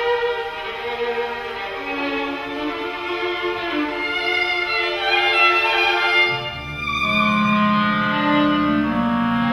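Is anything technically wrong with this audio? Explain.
No, nothing technically wrong can be heard in this audio. Nothing in the sound points to a problem in how it was captured, processed or delivered.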